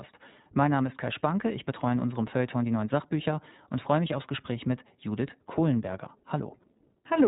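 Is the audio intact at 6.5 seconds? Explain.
No. At 6.5 seconds, as through the whole clip, the speech carries iLBC codec damage. Each 20 ms frame's excitation is coded independently, which fits the 15.2 kbps mode, so the sound is rough and slightly synthetic with nothing above 3.8 kHz. A plain low-pass filter would leave it smooth.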